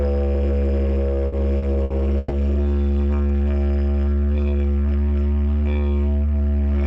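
From 1.27 to 2.32 s the audio has repeated stalls (stutter). The jitter buffer ran dry four times, and each time the receiver held and repeated the last sound until more packets arrived, fading it during the longest wait of 120 ms. About 270 ms of fill covers roughly a quarter of that stretch, yet nothing is lost. What sets this apart from a buffer slow-down is that the sound halts and catches in distinct hiccups rather than stretching evenly.

Between 3.27 and 4.51 s a jitter buffer slow-down plays the audio at about 82 % of its proper speed. To rebuild its reserve, the receiver repeated single pitch periods and small pieces of pauses over and over, adding 239 ms in total. The pitch stays where it should be, so the sound seems drawn out and lazy rather than deeper. Unlike the stutter, there are no hard stops, only a smooth, continuous drag.

From 6.33 s to the end, a jitter buffer speed-up runs the audio at about 119 % speed. 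The buffer was holding more than its target, so the receiver trimmed short slices of one or a few pitch periods in quick succession and removed roughly a tenth of a second. The pitch stays put while events crowd together and sound hurried. This is the mirror image of the slow-down, with material cut out rather than repeated.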